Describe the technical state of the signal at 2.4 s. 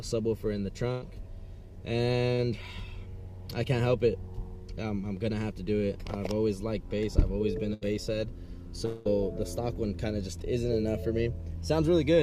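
A brief smear runs from 2.34 to 2.40 s, where about 40 ms of audio failed to arrive in time. This short concealed packet loss was patched by the receiver, which extended the preceding sound across the hole before blending back into the real signal.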